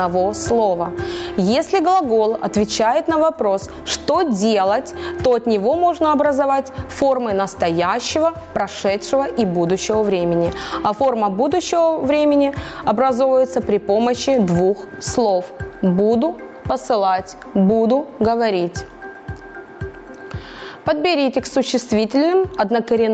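Gain pumping runs through the whole clip: the gain ducks under each loud sound by around 15 dB, squashing loud and soft parts together. The likely cause is input gain set far too high, with a fast limiter or compressor yanking it down on each peak. The audio also stops at 8 kHz, which fits a call path's band limit.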